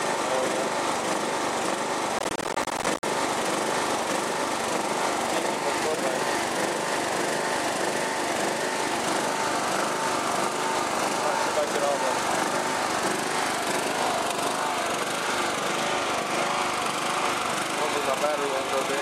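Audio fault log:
2.19–3.03 s, processor overload crackle: the processor repeatedly misses its buffer deadlines, so dozens of short silent gaps with hard edges break the sound, heard as a gritty crackling tear. The gap spacing fits buffers of roughly 10 ms.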